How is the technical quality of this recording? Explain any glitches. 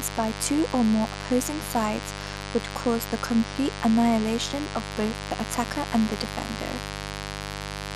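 The recording's technical quality is held back by one problem that runs the whole length of the speech.

Throughout, a steady, raspy buzz sits about 10 dB below the speech. This is mains buzz: switching spikes leak in twice each 50 Hz cycle, spreading harmonics to several kilohertz.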